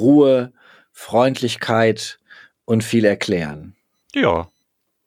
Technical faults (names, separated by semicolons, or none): channel delay (comb filtering)